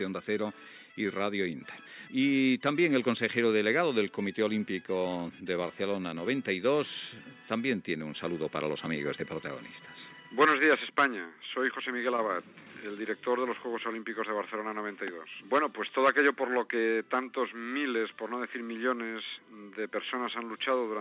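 No audible technical faults.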